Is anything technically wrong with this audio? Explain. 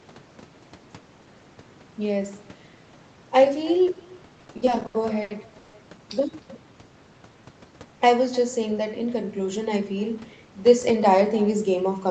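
Yes, there are three faults.

Echo with no canceller runs through the whole clip. The far end played the call on a loudspeaker, its microphone picked that up, and nothing removed it, so the speech returns after the network round trip. Each phrase is shadowed roughly a third of a second later by a faint, thin copy about 22 dB down. On a spectrogram, every syllable has a weaker duplicate displaced to the right by that delay.

Repeated stalls (stutter) occur from 4.39 to 5.75 s. Packets arrived late again and again, so the jitter buffer kept running dry. Each time, the receiver stretched the last sound to cover the wait. More than a dozen stalls add about 420 ms of filler, roughly 31% of that stretch, and the longest lasts 150 ms. Nothing is lost, but the speech drags and stutters. The waveform shows repeated, smeared, looping fragments, and the spectrogram shows horizontally stretched harmonics at each stall.

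Jitter buffer speed-up occurs from 8.71 to 9.47 s. The buffer had built up more audio than it targets, so the receiver cut out many tiny pitch-period slices to catch up, removing around 70 ms in total. That span plays at about 108% speed with unchanged pitch and sounds slightly hurried. Visually, syllables are compressed in time, while the harmonic spacing on the spectrogram stays the same.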